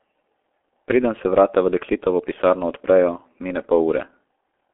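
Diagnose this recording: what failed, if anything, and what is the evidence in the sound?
Muffled, hoarse speech with smeared consonants and nothing above 3.7 kHz throughout: the G.723.1 codec stage, whose coarse 30 ms frames fit roughly 6.3 kbit/s.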